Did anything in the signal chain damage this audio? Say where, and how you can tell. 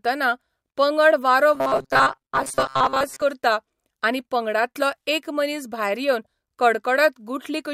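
Yes, at the driver or buffer stage. From 1.55 to 3.22 s, between "पंगड वारो" and "करता आनी पंगडांतलो एक", the speech becomes a rigid metallic buzz at 134 Hz. This is robotic sound from repeated short buffers. A starved buffer likely replayed its last 7.5 ms, skipping most real audio there.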